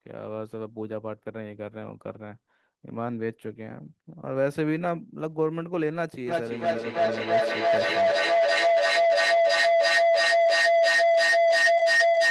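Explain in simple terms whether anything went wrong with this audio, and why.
Feedback howl starts at 6.27 s and continues to the end of the clip. Two devices in the same room seem to be on this call, so the loudspeaker's sound reaches the microphone and goes round again, getting louder on every trip. Over the speech comes a rising, steady mid-pitched tone, a little above middle pitch, that pulses about three times a second and ends up louder than the speech itself.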